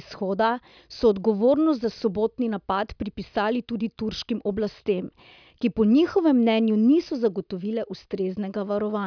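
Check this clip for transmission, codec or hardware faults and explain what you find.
Nothing in the speech signal points to a technical fault, since it stays continuous, stable and intact throughout.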